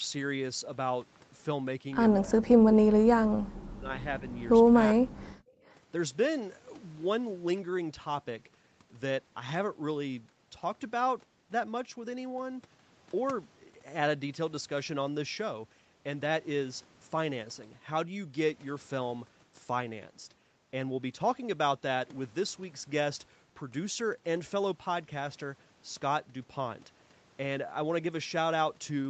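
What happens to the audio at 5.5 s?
The room sound behind the speech dips sharply from 5.41 to 5.61 s, falling by about 17 dB at its deepest before returning. This is background gated by the echo canceller, which clamped the microphone hard while the far-end loudspeaker was playing, then released.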